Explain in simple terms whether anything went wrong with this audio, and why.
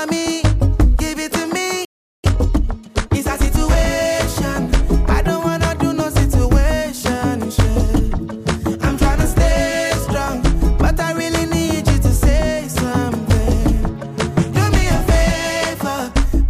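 At 1.85 seconds the sound suddenly stops. Silence lasts until 2.24 seconds, about 0.39 seconds. This is a playback stall. The player likely ran out of data or was briefly blocked, so nothing reached the output.

From 2.24 to 3.78 seconds the audio sounds hurried. It runs about 1.25 times faster, yet the pitch stays normal. This is time-compressed catch-up. The player snips out tiny pieces and blends the joins to recover lost time.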